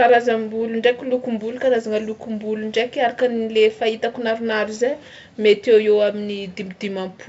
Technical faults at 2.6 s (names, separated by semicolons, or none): none